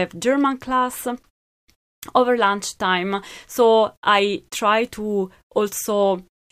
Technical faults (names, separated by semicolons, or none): none